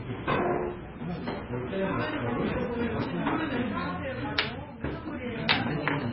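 Right from the start, and running until 3.77 s, there's periodic clock jitter. Something is wobbling the converter's sample clock at a steady rate of around 1 kHz, so every part of the sound picks up copies spaced that far above and below it. Higher-pitched content gets it worst. You hear it as a gritty, metallic rasp riding on the audio, and it clears up once the wobble stops at 3.77 s.

Across the whole clip there's also heavy damage that's likely from MP3 compression at a very low bitrate, on the order of 16 kbps. The treble is simply gone: nothing survives above 5.6 kHz, so everything sounds dull and boxed-in. Starved of bits, the encoder drops quieter frequency detail that flickers in and out frame to frame, which gives the sound a watery, swirling texture and softens sharp attacks into smears.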